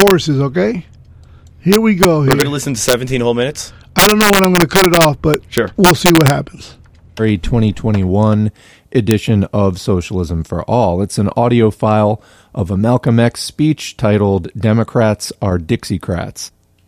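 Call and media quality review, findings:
Integer overflow, speech peaks at 0.00–0.11, 1.73–2.42, 2.89–2.93, 3.99–6.30 (about 7 dB over) and 9.11 s: unclamped gain stage wraps sign, violent cracks.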